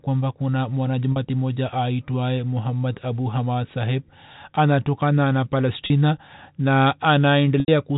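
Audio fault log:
1.12 s and 5.86 s, packet loss with pitch repetition: each 40 ms gap, which fits two lost 20 ms packets, is bridged by repeating the last pitch period, so the speech briefly holds on a buzzy tone instead of dropping to silence or clicking.
7.6 s, packet loss with pitch repetition: the 80 ms gap outlasts the roughly 50 ms fade of the repeated pitch period. The buzzy hold dies away into brief silence, then speech cross-fades back in, unlike an abrupt mute.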